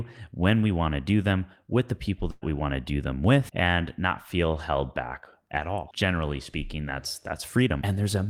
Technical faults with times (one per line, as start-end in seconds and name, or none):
2.31-2.44 burst of packet loss